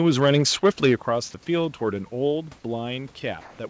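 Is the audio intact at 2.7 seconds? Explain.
Yes, the audio is intact at 2.7 s, with no fault at that moment.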